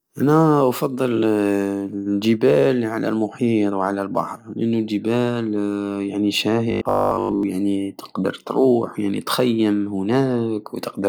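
Robotic sound from repeated short buffers, 6.71 to 7.43 s, after "البحر لأنو الجبال يعني": a rigid 50 Hz metallic buzz, likely from a 20 ms buffer replayed while most real audio was skipped.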